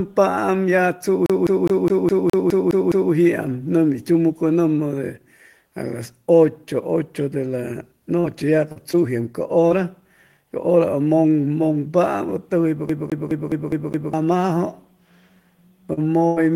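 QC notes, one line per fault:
1.26–3.13 s, CD stuck on one turn: the same 0.21 s slice repeats nine times, each jump back marked by a short mute, giving an even, rapid stutter.
8.20–8.26, 8.72–8.77, 8.91–8.95, 9.69–9.72 s, short concealed packet loss: 20 to 40 ms holes filled by extending the preceding sound, heard as brief smears or wobbles.
12.89–14.14 s, CD stuck on one turn: the same 0.21 s loop plays six times with a mute at each skip, again a mechanical, regular stutter.
15.93–15.99 s, short concealed packet loss: 40 ms never arrived, so the last sound was continued then blended back, leaving a quick smear.
16.27–16.38 s, burst of packet loss: about 100 ms lost; the last sound is held and faded as a buzz or hiss, then audio resumes past the gap.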